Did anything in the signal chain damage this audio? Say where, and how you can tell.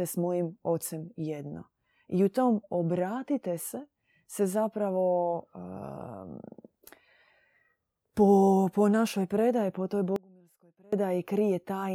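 Yes. There is an audio dropout to a faint residue at 10.16 s, just after "našoj predaji po toj". The speech cuts out abruptly and returns at 10.93 s, so about 0.76 s is lost. The gap is not silent. A faint sound remains, roughly 30 dB below normal level. That points to a stall upstream while the later path stayed live, likely in the driver or buffer stage.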